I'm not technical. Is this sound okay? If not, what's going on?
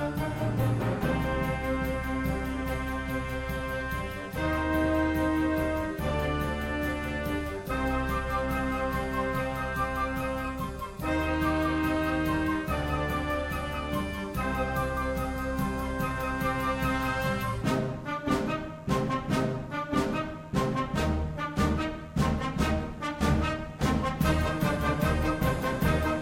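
No. There are repeated frames at about 0.62 s: a tiny slice of audio, roughly 26 ms long, plays twice in a row, causing a brief stutter. It fits a single compressed chunk being stored or sent twice, adding about 26 ms to the sound.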